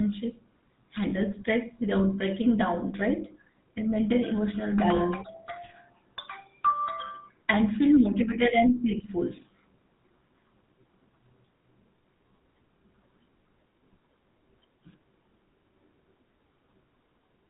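The speech carries GSM full-rate codec damage throughout. Pulse-driven vocal-tract coding, consistent with 13 kbps, cuts everything above 4 kHz and adds plain buzzy, gravelly roughness. Lost GSM frames at 1.10–1.14 s and 4.96–4.99 s are concealed by repeating the previous frame, leaving a brief rough, metallic ring.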